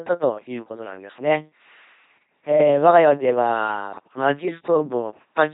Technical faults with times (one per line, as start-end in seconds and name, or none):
0.00-5.53 LPC-10 vocoder